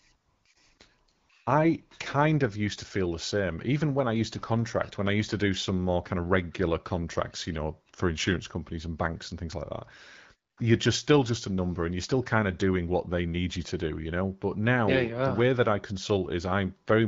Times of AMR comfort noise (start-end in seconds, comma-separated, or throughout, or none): 0.15-0.79, 1.11-1.29, 10.51-10.57